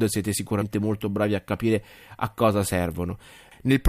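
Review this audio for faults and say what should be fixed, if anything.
Compressed frames skipped at 0.61 s: about five 23.2 ms frames were dropped, so the audio jumps ahead roughly a tenth of a second. The waveform's envelope changes abruptly, and a spectrogram shows a vertical seam where patterns misalign. Verify file integrity after every transfer.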